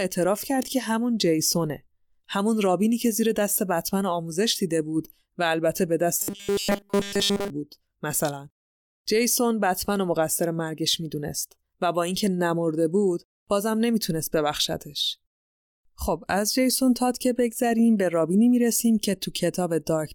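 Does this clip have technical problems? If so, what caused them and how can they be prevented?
Yes. From 6.19 to 7.5 s the speech becomes a rigid 200 Hz metallic buzz, robotic sound from repeated short buffers, likely a starved stream looping a 5 ms buffer. Prevent it with adequate buffering and steady network delivery.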